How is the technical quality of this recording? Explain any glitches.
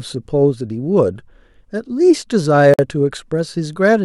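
The recording has one glitch. At 2.74 to 2.79 s, a gap at a join of encoded pieces drops in about 50 ms of silence. Separately encoded segments kept their padding, so the speech stops abruptly and resumes exactly where it left off, without the skipped content a dropout would cause.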